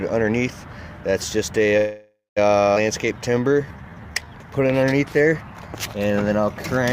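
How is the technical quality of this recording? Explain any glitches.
Three separate glitches fall in the recording, all typical of audio carried over a packet network.

A call audio freeze runs from 1.77 to 2.39 s. The stall was likely caused by packets being held up in transit until the receiver's jitter buffer ran dry. To cover the wait, the receiver extends the last sound as a fading buzz or hiss, and the final 200 ms are silent. When delivery resumes, the audio picks up exactly where it stopped. Nothing is lost, but about 0.6 s of dead time is inserted.

A skip ahead occurs at 2.75 to 2.78 s. Here a stretch of audio was discarded while later material was already waiting, so playback jumps forward. Roughly a fifth of a second of sound is missing, and the two sides of the cut are joined with only a tiny 13 ms bridge. The result is an abrupt lurch rather than a gap, which shortens the delay that built up during the freeze.

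A jitter buffer slow-down covers 3.14 to 4.31 s. With its reserve running low, or after raising its target delay, the buffer built up a reserve by repeating single pitch periods and small pieces of pauses many times over. This stretches the passage to about 83% speed and adds 203 ms. The pitch stays the same, but sounds are drawn out and can take on a slight warble.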